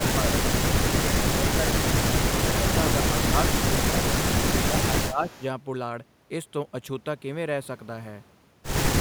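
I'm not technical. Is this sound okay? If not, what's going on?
No, there are problems. The voice keeps dipping and partly dropping out in short bursts: right at the start up to 0.24 s, across 0.91 to 2.1 s (the worst stretch, where it gets noticeably quieter in patches), again at 3.81 to 4.01 s, and from 4.7 to 5.23 s. This is most likely speech suppressed in double talk. When both people on a call talk at once, the system meant to cancel loudspeaker echo can't tell the talker apart from the echo, so it turns everything down for a moment.

Straight after that, from 5.29 to 5.43 s, there's a brief, faint repeat of the voice arriving about a quarter of a second late. This is likely echo leak. The far end is playing the call through a loudspeaker, its microphone picks that sound back up, and its echo canceller fails to remove all of it. The leftover scrap gets sent back, so you hear a weak delayed copy of what was just said.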